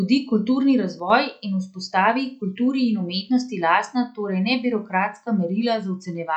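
A speech recording with a sudden gain jump: at 1.00 s the level drops by about 5 dB in a single step, holds there until 1.10 s, then snaps back. Both the speech and the background noise fall and return together, which points to a digital gain change applied without a ramp, likely a setting switch or bit shift. On a waveform the envelope shows a flat-sided notch about 105 ms wide. On a spectrogram every frequency band darkens at once between two sharp vertical edges.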